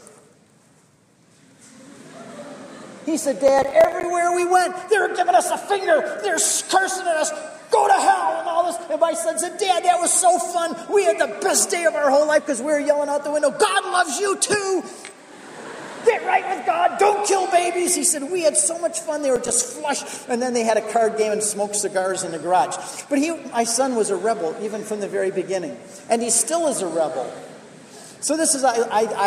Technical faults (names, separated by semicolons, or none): processor overload crackle